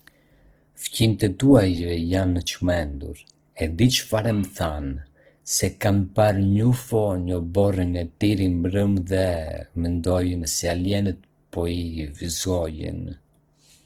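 From start to finish the speech sounds rough and grainy, with upper harmonics turned to hiss. That fits Opus compression, likely in its CELT music mode near 16 kbps, where starved bands get filled with noise. A spectrogram shows full-width but speckled, noise-textured highs without clean harmonic lines.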